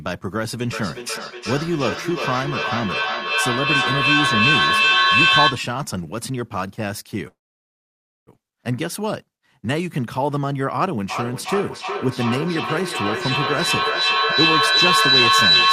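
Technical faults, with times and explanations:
0.73–5.75 s, feedback echo between two devices: the speech returns about every 400 ms, thinner and more ringing on each pass, rising to about 6 dB above the direct speech. A second device in the room replays the call, its loudspeaker feeds this microphone, and this device's echo canceller cannot remove sound it did not play itself.
7.27–8.29 s, call audio freeze: the sound stretches into a short fading tail, then goes silent for about 0.93 s before resuming where it stopped. This likely comes from delayed packets draining the jitter buffer, so roughly 1 s of gap is inserted and nothing is lost.
11.10–15.72 s, feedback howl: the loop between the two devices gains level on each pass, so repeats grow instead of fading and narrow to a tone around 4 kHz, with the loop coming round about every 400 ms and peaking about 8 dB above the speech until the clip ends.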